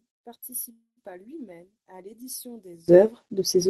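From the start to 2.88 s the speech drops by about 19 dB when heard in mono, leaving only a faint residue. This is likely one channel inverted, so the shared centre content cancels. On a waveform the mono sum is a shrunken trace that recovers abruptly at 2.88 s.

Between 0.71 and 0.99 s a call audio freeze interrupts the sound. The last fragment carries on as a fading buzz or hiss for roughly 160 ms, then about 90 ms of silence, before the speech resumes where it stopped. That points to a jitter buffer that likely ran empty while packets were delayed, inserting about 253 ms with nothing lost. A spectrogram shows smeared, static bands fading into a blank gap, all under the codec's roughly 12 kHz ceiling.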